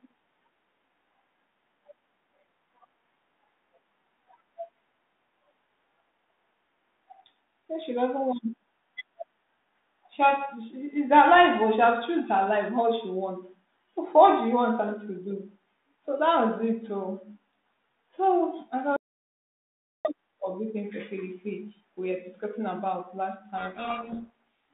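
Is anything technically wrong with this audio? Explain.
Yes, there are two faults in this speech clip, which has been carried over a G.726 ADPCM telephone path at 32 kbit/s with a narrow band of roughly 200 Hz to 3.7 kHz.

From 18.97 s to 20.05 s there is an audio dropout to silence lasting about 1.08 s. The speech stops abruptly and resumes mid-flow, and the gap is digital silence with no room tone at all. The likely cause is that the input was interrupted, through a lost link, a disconnected device or a momentary mute, while the recorder kept writing silence. Whatever was spoken during that second is not recoverable.

From 23.58 s to 24.3 s there is a codec payload misread. The decoder is reading the G.726 code words with their bit order reversed, so each 4-bit difference value is interpreted as the wrong step. The adaptive predictor then tracks garbage, and the speech is buried under harsh, gritty distortion for that stretch. 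This continues until the packing on both ends agrees again, and here it persists to 24.3 s.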